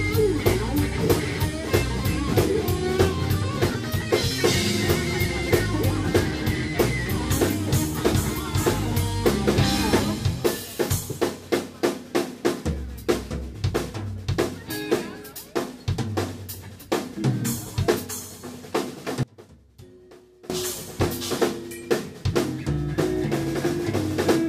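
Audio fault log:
19.23–20.50 s, one channel inverted: the sound collapses by about 24 dB to a faint residue. Likely a polarity flip cancelling the shared centre content.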